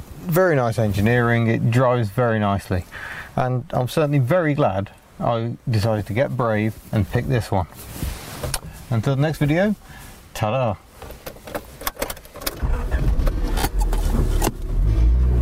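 No technical faults can be heard anywhere in the audio. There is nothing here that needs a timestamp or an explanation.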